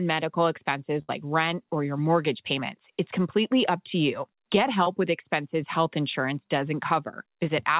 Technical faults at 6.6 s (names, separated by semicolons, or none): none